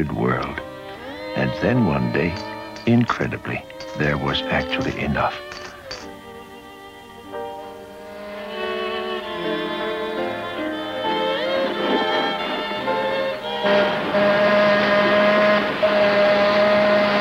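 Nothing stood out as a technical problem on listening.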